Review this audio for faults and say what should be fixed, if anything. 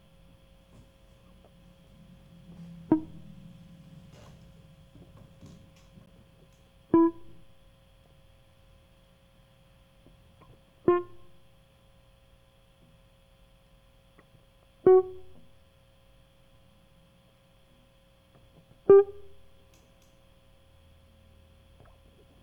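At 6.06 s the music drops out for about 12 ms in a block of digital silence: the signal cuts straight out and comes straight back with no fade, so the edges register as a short tick or pop rather than a heard gap. A hole of that length fits a 512-sample buffer the audio program did not fill in time. Prevent it by giving the audio thread more buffer headroom or priority so every block is delivered before its deadline.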